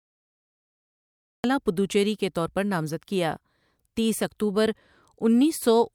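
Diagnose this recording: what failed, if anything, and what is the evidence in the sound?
The recording has a cut-off start, a failure at the capture or storage stage. From 0.0 to 1.44 s there is only digital silence. At 1.44 s the speech cuts in abruptly, already mid-sound. There is no natural attack and no fade-in. Recording did not begin when the sound did. Writing to the file started late, so the true onset of the speech was never captured and the stream simply switches on partway through it.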